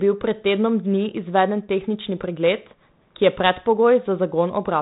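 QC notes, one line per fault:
No faults heard.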